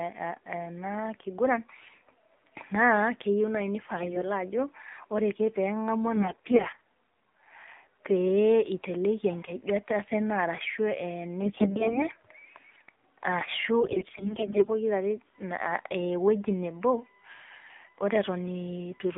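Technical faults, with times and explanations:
Throughout: AMR narrowband mobile codec. The speech carries a buzzy, synthetic edge, which fits a low AMR-NB mode of about 7.4 kbps. The codec rebuilds the voice from a vocal-tract model excited by only a few pulses per 5 ms subframe, so the fine harmonic texture is lost. On a spectrogram, all energy stops at a hard 4 kHz ceiling with nothing above it, and the harmonics below look coarse and smeared.
3.96–4.32 s, 6.16–6.86 s, 11.42–12.05 s, 13.80–14.70 s: AMR bit errors. In each stretch the speech keeps roughly its pitch and loudness but turns hoarse, scratchy and gargly. The last one, at 13.80–14.70 s, is the harshest. Flipped bits in the weakly protected parts of each frame scatter the excitation pulses and skew the gain and spectral detail. A spectrogram shows ragged noise filling the gaps between broken harmonics, and the waveform looks jagged rather than cleanly periodic.
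15.34–19.17 s: USB whine. A steady, fixed-pitch whine sits under the speech from 15.34 s to the end, about 35 dB below it. It is strongest at 2 kHz, with its fundamental at 1 kHz. This points to current drawn in 1 ms USB frames leaking into the audio ground or supply. On a spectrogram, thin unbroken horizontal lines at 1 kHz and 2 kHz start abruptly at 15.34 s and run regardless of the speech.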